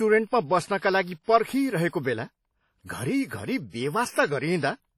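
Speech throughout, with heavy ringing, washy smearing and breathing hiss across the whole clip, likely from WMA compression at a bitrate that fits around 32 kbps; a spectrogram shows gappy, zeroed weak lines and nothing above 17.4 kHz.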